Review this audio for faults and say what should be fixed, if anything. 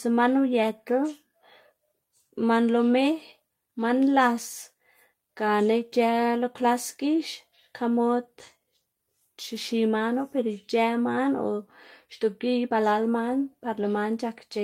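No faults turn up in the audio, so nothing needs to be fixed.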